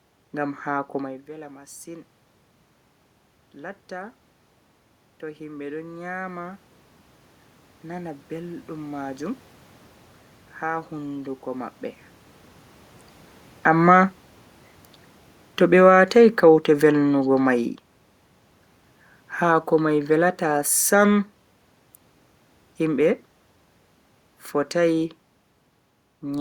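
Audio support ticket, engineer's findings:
Automatic gain falling, 13.51 to 25.12 s. Speech sinks about 9 dB, room noise dropping right along with it. Probable component: AGC. It judged the input too loud or its background noise too strong and pulled gain down gradually. The level shifts near 1.0 s and 13.5 s come from the talker moving relative to the mic, and the room noise is in the recording itself. Neither is a system fault.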